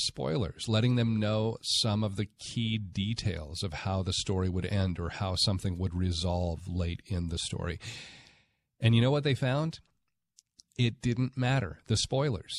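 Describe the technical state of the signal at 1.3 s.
At 1.3 s the speech signal is intact, with no dropout, clipping, glitch or other fault at that moment.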